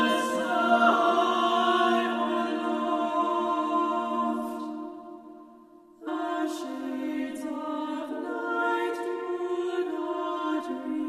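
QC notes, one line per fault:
6.06 s, stream segment skipped: the sound jumps abruptly forward with a brief blip, likely because one stream segment failed to load and playback resumed at the next.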